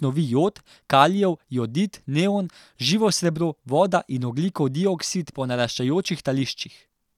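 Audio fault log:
Nothing in this speech recording stood out as a technical problem on listening.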